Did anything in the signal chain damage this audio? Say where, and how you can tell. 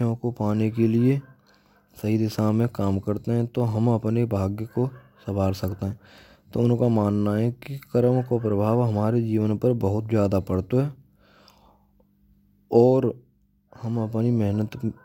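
No, nothing in the chain damaged this speech.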